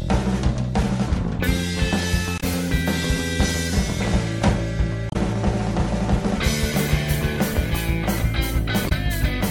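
Short disruptions of roughly 70 to 80 ms break the sound at 2.37 to 2.44 s, 5.08 to 5.16 s and 8.85 to 8.92 s, each a chirp, squawk, click or brief hole. This is damaged data in a compressed stream: corrupted bytes made the decoder misread frames and lose sync.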